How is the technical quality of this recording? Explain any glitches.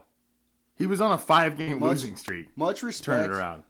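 Two glitches interrupt this speech recording.

At 1.61 to 1.69 s, just after "was on a five", a burst of packet loss: about 55 ms of the last sound is stretched and faded, then speech resumes with roughly 60 ms skipped. The smeared fill, rather than clean silence, separates it from a plain dropout.

At 2.28 s an electrical switching spike adds a sharp snap over the speech, likely from a nearby switch or static discharge arcing into the audio line. Nothing is removed, which distinguishes it from a loss-related click.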